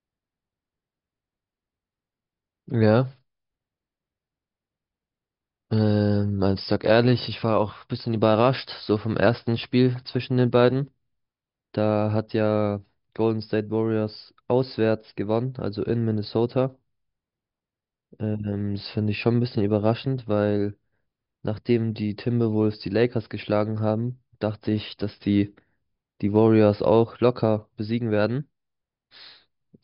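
Nothing here trips a technical fault anywhere in the speech recording, so there's simply nothing to flag.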